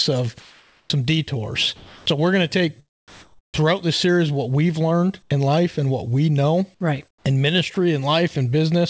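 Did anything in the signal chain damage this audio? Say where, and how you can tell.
Yes. Sound chopped by the voice detector, 0.40–3.61 s, before "this series what we've": gating in call processing, likely, swaps about 1.26 s for comfort noise, leaving a gapped, flickering spectrogram.

Sound dropped by the voice detector at 5.22–5.30 s, between "series what we've learned" and "in life and what", and 7.74–7.76 s: the gate likely closes, leaving flat-noise waveform gaps.

Comfort noise in place of the background, 7.08–7.76 s: discontinuous transmission likely fills about 180 ms with synthetic noise, a smooth featureless band replacing the textured background on a spectrogram.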